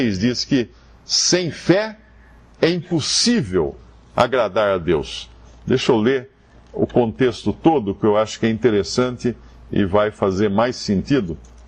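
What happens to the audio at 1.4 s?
Nothing goes wrong at 1.4 s: the audio there is intact, with no dropout, click or other fault.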